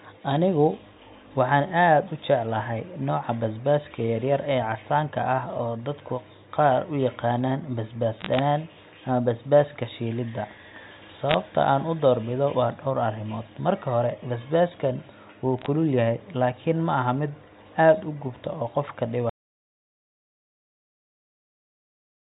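At 8.19 to 8.4 s, just after "qaar u yaqaanaan basbaas", then at 11.29 to 11.34 s and 15.59 to 15.66 s, between "hore basbaaskan wuu" and "kulul yahay laakiin", bit errors on a digital phone line give short bursts of crackle. Flipped bits in the G.711 mu-law stream corrupt single samples, and hits on the sign or high bits sound as sharp ticks over intact speech. The error rate is a fraction of a percent. From 19.29 s to the end the audio drops out to silence with no room tone, most likely from a lost input link or mute while the recorder kept writing silence.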